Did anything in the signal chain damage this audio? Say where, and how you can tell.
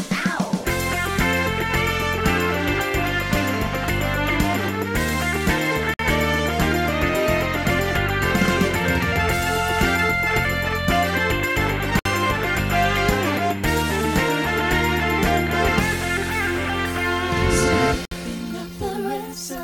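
Yes. Gaps at the joins of encoded pieces appear at 5.94, 11.99 and 18.05 s, lasting 54, 60 and 60 ms, every 6.0 s. Separately encoded pieces kept their encoder delay and end padding. Unlike a network dropout, the sound resumes exactly where it stopped.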